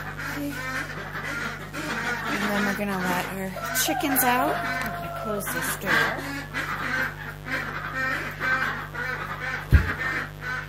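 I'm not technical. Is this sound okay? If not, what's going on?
No. Mains buzz runs through the whole recording: electrical interference from the 50 Hz power supply adds a fairly loud, steady, raspy hum under the sound.

A dropped buffer (overrun) is heard at 5.83 s as a small jump. The recording computer likely fell behind, losing a tiny slice of sound.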